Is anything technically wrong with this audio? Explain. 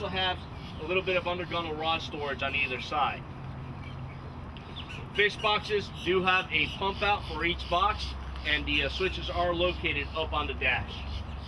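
No, nothing technically wrong can be heard in this audio; the signal stays intact and steady throughout.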